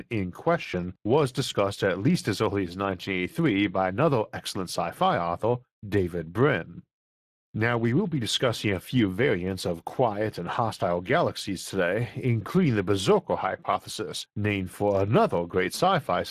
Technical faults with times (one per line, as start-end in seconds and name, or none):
0.00-16.30 Speex codec